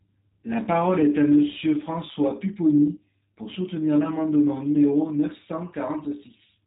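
Speech that sounds thin, slightly rough and synthetic throughout, with a clearly audible buzzy graininess and no content at all above about 3.8 kHz. This is G.729 codec damage. The G.729A coder discards the waveform and rebuilds each 10 ms frame from a vocal-tract filter, a pitch predictor and a handful of pulses, so fine detail is replaced by an approximation. The harsh band limit and the plainly synthetic texture fit its 8 kbit/s rate.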